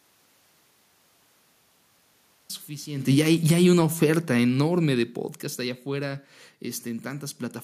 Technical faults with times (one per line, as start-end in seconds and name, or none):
3.03-6.19 automatic gain falling